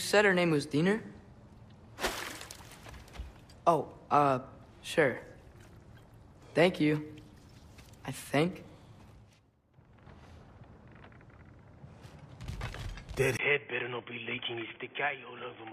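At 13.37 s, after a gap of about 20 ms, the sound turns dull and boxy, with nothing above 3.4 kHz, drops a few decibels and gains a faint new noise floor until the end. It is likely an input switched to a poorer device. A plain low-pass filter wouldn't change the noise and level.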